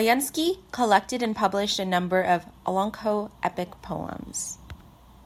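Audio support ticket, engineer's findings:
No audible defects found in the speech signal; level, continuity and playback path check out with nothing to escalate.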